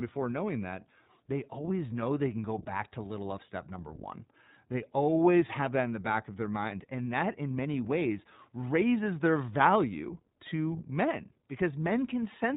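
Throughout, the speech has passed through the iLBC codec, whose narrowband, frame-by-frame coding, consistent with 20 ms frames at around 15.2 kbps, discards everything above 4 kHz. The damage is plainly audible: a muffled, band-limited sound with a rough, synthetic edge.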